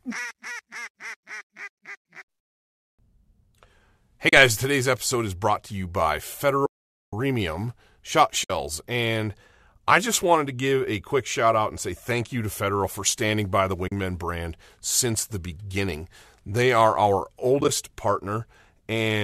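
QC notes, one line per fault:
4.29–4.33 s, 6.66–7.13 s (after "brought to you by"), 8.44–8.50 s, 13.88–13.92 s and 17.61–17.69 s, AAC frame loss with muting: lost frames, likely from the low-delay AAC stream's roughly 10 ms framing, were decoded as silence. Overlapping windows fade each 30–470 ms gap softly out and in. The last gap is broken into brief dropouts.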